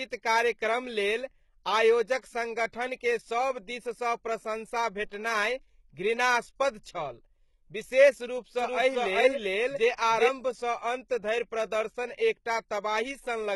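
Throughout, the treble is heavily damaged, gritty and metallic above a crossover, with misaligned harmonics on a spectrogram, likely HE-AAC compression at a bitrate that fits about 16 kbps. At 5.09 to 5.12 s, just after "सभ दिससँ प्रशँसा", pre-echo puts a short hiss of about 22 ms before an attack, visible as a smear preceding the transient. From 8.59 to 10.29 s, after "घृणास्पद छल विशेष", a doubled audio track appears: a copy about as loud as the original, lagging roughly 0.4 s, starting and stopping abruptly, which is likely a second, slower capture path. A waveform shows the envelope repeated at that offset.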